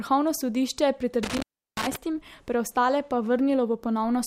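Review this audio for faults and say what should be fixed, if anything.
Between 1.23 and 1.96 s the speech crackles, then drops to faint hiss for about 350 ms. This is an intermittent contact, a loose plug or cable momentarily breaking the signal path. Reseat and secure every connector, and replace worn cables.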